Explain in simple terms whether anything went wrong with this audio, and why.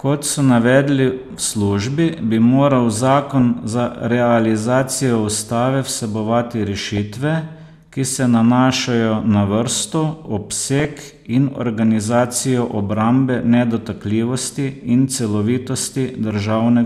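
DAB burbling at 3.18–3.41 s (after "bi moral"), 6.85–6.98 s and 10.79–11.24 s: weak reception corrupted the digital audio, so short blips of noise briefly break into the speech.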